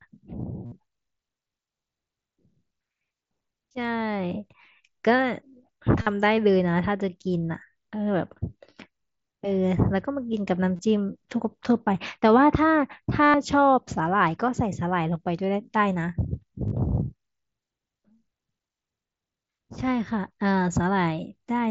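Concealed Bluetooth headset packet loss occurs at 0.66, 6.02, 10.76, 13.25 and 16.68 s. Lost packets were patched by repeating recent waveform. Each gap becomes a short buzzy hold that warbles as real sound resumes. The longest, at 13.25 s, lasts about 0.1 s.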